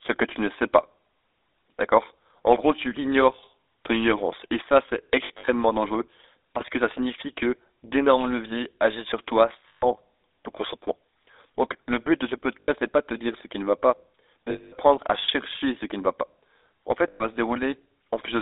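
GSM full-rate codec runs throughout. Its pulse-driven vocal-tract model and a line band of 300 Hz to 3.7 kHz make the speech buzzy, gravelly and muffled, which fits 13 kbps full-rate coding.

Pre-emphasis left on from 2.44 to 9.45 s. The treble lift was never undone, which fits an FM 50 µs curve with about 10 dB more at 10 kHz than at 1 kHz, so the speech sounds thin, bright and hissy.

Lost GSM frames at 5.24 to 5.49 s, 9.68 to 9.85 s, 12.60 to 12.69 s, 14.50 to 14.73 s and 17.08 to 17.26 s. The last good sound is held and repeated as a rough metallic ring. The first loss comes in short bursts spread across a quarter second, the longest around 70 ms.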